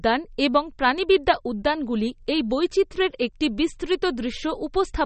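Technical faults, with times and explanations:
Throughout, MP3 compression: the speech sounds plainly watery and swirly with nothing above 8.4 kHz, likely from MP3 encoding at a low bitrate near 32 kbps that cuts treble and zeroes weak lines. A spectrogram shows a flat ceiling at 8.4 kHz and flickering gaps between frames.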